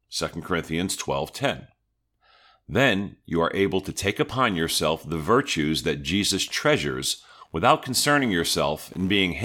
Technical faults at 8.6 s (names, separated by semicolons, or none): computer activity noise